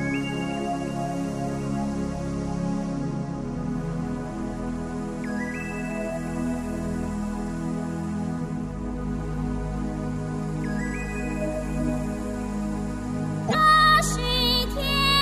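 Damaged data in the compressed stream, 13.44 to 13.55 s: corrupted bytes make the decoder misread frames and lose sync until the next header, leaving a brief garbled burst.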